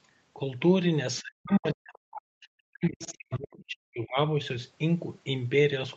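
A speech clip carried over a call path whose Opus coding limits the audio to about 8 kHz. Brief traces of the other side's voice leaking through appear at 1.17–1.22 s and 1.52–1.57 s, and for longer at 3.02–3.38 s. They sit roughly 20 to 30 dB below the talker, likely loudspeaker echo the canceller failed to remove. From 1.22 to 4.38 s the talker's speech is suppressed in double talk, dipping by as much as 40 dB over about three seconds in total, likely because the canceller attenuated both voices while both sides were talking.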